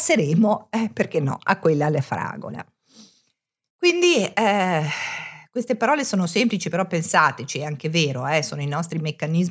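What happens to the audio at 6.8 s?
Nothing goes wrong at 6.8 s; the speech carries straight through that moment with no dropout, click or distortion.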